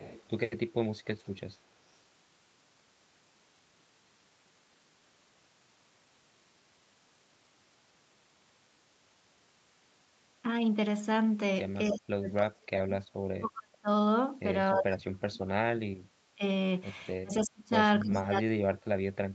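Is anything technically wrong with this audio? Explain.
Yes, two kinds of call-processing fault can be heard.

Echo leak: at 0.0 to 0.3 s, 11.86 to 11.93 s, 17.42 to 17.46 s and 18.13 to 18.19 s, faint scraps of sound trail the speech by about 295 ms, mostly well below it but closer in level near 11.9 s. This is likely a loudspeaker echo that the far end's echo canceller failed to remove.

Speech suppressed in double talk: from 11.91 to 13.88 s, 14.73 to 16.43 s, 17.22 to 17.73 s and 18.03 s to the end, the speech sinks sharply, by as much as about 40 dB, and breaks up in pieces. Likely cause: the echo canceller could not tell this talker apart from the overlapping echo and turned both down.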